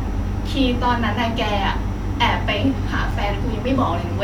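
At 3.11 s the speech drops out for a brief hard-edged hole of about 5 ms, heard as a tiny click-like break. This is a gap between stream segments: the time stamps of two 4-second segments leave a small space, which the player fills with silence rather than losing any audio.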